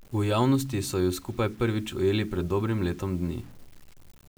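From start to end the speech carries low bit depth without dither: a grainy, rasping distortion that rides on the voice and swells and shrinks with it, with quiet word tails breaking up into sputter. The likely cause is rounding to about 7 bits with no dither, leaving error roughly 30 dB below the speech. A zoomed waveform shows visible stair-steps, and a spectrogram shows broadband hash that appears only while sound is present.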